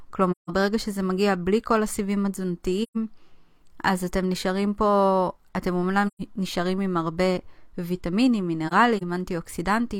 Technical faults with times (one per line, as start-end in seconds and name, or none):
0.31-0.51 AAC frame loss with muting
2.82-2.97 AAC frame loss with muting
6.07-6.21 AAC frame loss with muting
8.67-9.02 AAC frame loss with muting